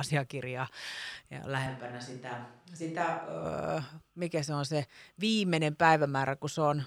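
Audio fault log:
1.67–3.45 s: switch to a distant microphone. The close microphone likely dropped out, so speech turns abruptly hollow, roomy and thin, about 5 dB quieter, with more room noise.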